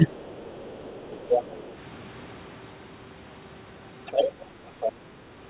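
Speech suppressed in double talk, 0.00 to 0.15 s: the speech dips by roughly 15 dB for about 150 ms, likely because the echo canceller, hearing both sides at once, could not tell the talker from loudspeaker echo and turned everything down together.

Other side's voice leaking through, 0.20 to 1.72 s, 4.06 to 4.32 s and 4.80 to 4.92 s: a second voice sits underneath, very faint in the first stretch, then only about 10 dB and about 15 dB below the speech. It is likely loudspeaker playback that the echo canceller failed to remove from the microphone. Throughout, nothing is heard above 4 kHz, which fits a G.711 mu-law call path.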